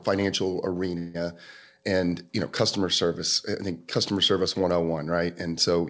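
From 0.98 to 1.24 s there is a call audio freeze: the sound stalls and the last instant is drawn out as a buzzy or hissy tail that fades over roughly 160 ms instead of dropping to silence. The likely cause is delayed packets that emptied the jitter buffer. The audio then resumes exactly where it left off, so nothing is lost, but everything afterwards runs about 164 ms late. On a spectrogram the stretch shows as a flat, repetitive band copying the preceding frame's spectrum and dimming steadily, while the waveform keeps a decaying envelope with no dropout to zero. Across the clip, nothing appears above 8 kHz, which fits a wideband G.722 call path.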